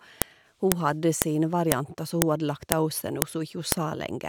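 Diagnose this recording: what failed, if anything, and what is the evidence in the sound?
What failed is the file header played as audio, somewhere in the storage or streaming stage where the pieces get joined. You get a sharp, loud click at 0.22, 0.72, 1.22, 1.72, 2.22, 2.72, 3.22 and 3.72 s, one every half second no matter what the speech is doing. So the audio was stitched from 0.5 s WAV pieces without stripping each header, and those few dozen bytes of header get decoded as a burst of samples.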